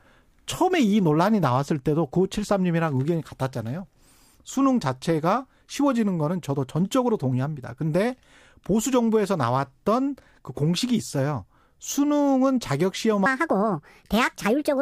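From 13.26 s to the end at 14.82 s, the speech jumps into a section at the wrong speed: it runs 1.5 times too fast, so the voice rises about seven semitones and sounds hurried and chipmunk-like. This is likely a resampling or clock mismatch on that stretch. Pitch and pace change together and abruptly, which separates it from a pitch shift that keeps timing or a time-stretch that keeps pitch.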